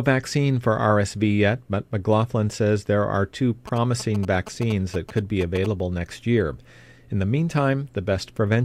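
GSM signalling bursts from 3.68 to 5.66 s, after "says there are two": a nearby 2G phone's radio pulses, rectified by the audio circuit, gallop as a dit-dit-dit of short 217 Hz buzzes, well below the speech.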